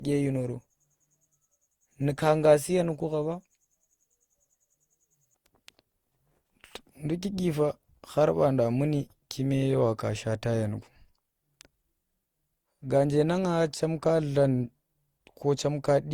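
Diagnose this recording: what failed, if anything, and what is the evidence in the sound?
Throughout the 16-second speech clip the sound is swirly, smeared and hollow, with blurred attacks, though energy reaches about 20.2 kHz. This is likely codec-stage generation loss: roughly seven Opus passes near 64 kbit/s, each requantising on a shifted frame grid, stacking noise.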